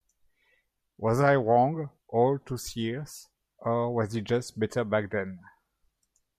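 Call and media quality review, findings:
No audible faults found on the speech path; nothing to escalate from this recording.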